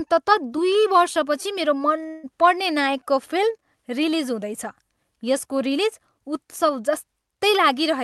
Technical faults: long network dropout

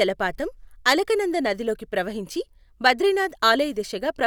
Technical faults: none

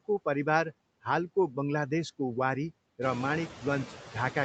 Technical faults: noise suppressor artifacts

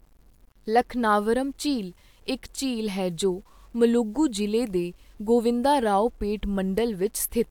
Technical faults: low bit depth without dither

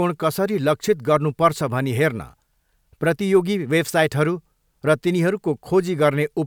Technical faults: none

